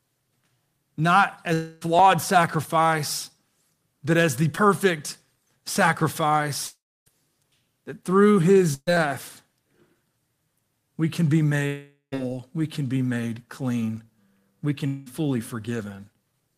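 From 1.53 to 1.83 s the speech stretches into a fading buzz, and the same happens at 6.67–7.08 s, 11.67–12.14 s and 14.86–15.08 s. This is likely a long network dropout, with the receiver continuing the last sound. On a spectrogram, repeated harmonics smear and fade. The 6.67 s and 11.67 s gaps end in near-silence, flat on the waveform for about 0.29 s and 0.14 s.

At 4.55–4.59 s a short concealed packet loss leaves a brief smear where about 20 ms of audio never arrived in time. The gap was patched by extending the preceding sound, seen as a tiny blurred column on the spectrogram.

A burst of packet loss at 8.74–8.89 s loses about 140 ms. The concealment holds the last sound as a decaying buzz, then drops to about 50 ms of silence before speech resumes. The waveform shows a tapering envelope and a short flat gap.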